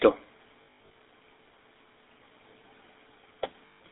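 From the start, the speech carries the damage of the GSM full-rate codec. The coder rebuilds the voice from a vocal-tract model excited by regular pulses at a reduced sample density. That leaves a plainly audible buzzy, gravelly roughness, which fits the 13 kbps full-rate coder. The band is also narrowed to roughly 250 Hz to 3.7 kHz, so the low body and the upper sibilance are both missing.

Between 0.62 and 0.94 s, lost GSM frames scatter about 240 ms of loss across 320 ms, with the longest single run about a tenth of a second. For each missing frame the decoder repeated the last good frame's parameters, so the voice holds on a rough, metallic ring instead of moving on.

A second burst of lost GSM frames runs from 3.66 to 3.8 s. This is a continuous 140 ms gap, heard as the same metallic, sustained smear as the concealment stretches the last intact sound.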